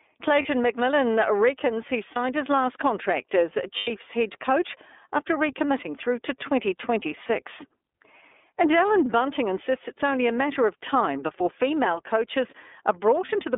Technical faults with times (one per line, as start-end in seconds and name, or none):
0.00-13.58 iLBC codec
0.42-0.46 lost iLBC frames
2.13-2.17 lost iLBC frames
3.77-3.90 lost iLBC frames
13.25-13.29 lost iLBC frames